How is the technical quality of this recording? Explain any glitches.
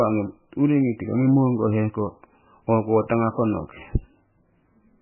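Poor. The speech is heavily compressed from start to finish. MP3 compression runs throughout: nothing reaches above 3 kHz, and the damage is heavy, which fits a very low bitrate of around 9 kbps. The likely cause is an MP3 encoder short of bits. It cut the treble at a fixed frequency and zeroed the weaker frequency lines. Those lines flicker on and off between frames, so the speech sounds dull, watery and swirly, with smeared attacks.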